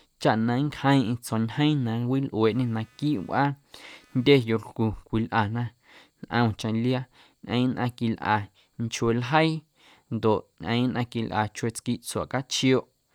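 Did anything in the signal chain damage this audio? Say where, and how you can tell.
Yes, in the analogue wiring. From 2.46 to 4.70 s the speech carries computer activity noise: load changes in the processor, graphics card or mouse pushed current through the ground the audio circuit shares, so that ground moved with the computer's work. It shows up as a buzz, chirp or scratch pulsing at around 300 Hz, roughly 40 dB below the speech. It appears and stops without following the speech.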